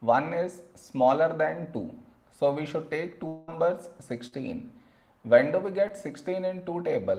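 At 3.27 s the sound turns into a smeared, fading continuation that runs to 3.49 s. That's a long network dropout, likely: about 200 ms never arrived, and the receiver stretched the last sound across the whole gap before the audio picked up later, minus the lost part.

Then there's short concealed packet loss, twice: 4.27 to 4.34 s, covering roughly 40 ms, and 5.88 to 5.91 s, about 20 ms. Each time the decoder patched the hole by extending what came just before, so you hear a quick smear or wobble.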